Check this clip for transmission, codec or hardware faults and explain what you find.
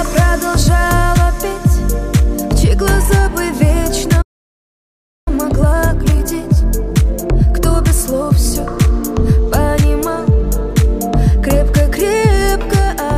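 Two faults are audible, both on the playback side. Playback stall, 4.21 to 5.28 s: the sound cuts out for about 1.05 s, likely because the player's buffer ran dry or its thread was blocked, then resumes. Time-compressed catch-up, 5.28 to 8.28 s: to recover the lost time, the player trims and cross-fades short slices, so the audio runs hurried at 1.1x without any pitch shift.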